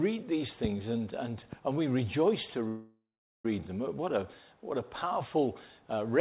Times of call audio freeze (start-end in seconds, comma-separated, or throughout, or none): 2.68-3.45